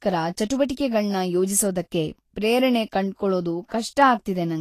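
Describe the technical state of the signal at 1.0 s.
At 1.0 s, as throughout, the speech is hissy and grainy, with nothing above 14.1 kHz: likely Vorbis compression, coarsely quantised treble fitting roughly 35 kbps. A spectrogram shows a hard ceiling and speckled upper bands.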